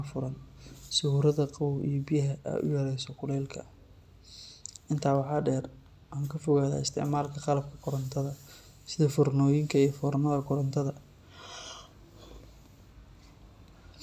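Nothing to report: no technical faults audible anywhere in the speech.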